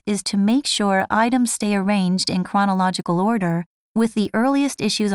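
All the way through, the speech ticks four times a second: a resampler restarted on every block, about 250 ms each, so every block edge lands a small click.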